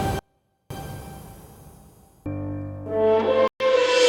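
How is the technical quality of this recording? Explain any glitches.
The recording has two audible breaks, both abrupt interruptions of the signal.

From 0.19 to 0.71 s, an audio dropout to a faint residue: the sound drops away for about half a second, leaving only a trace about 40 dB below normal. This likely comes from the wanted signal being lost while the path after the break stayed live.

From 3.48 to 3.66 s, a Bluetooth stall: playback cuts to 125 ms of silence, then resumes. This is likely interference delaying packets, so the headphones' buffer emptied and playback paused until the resent data arrived.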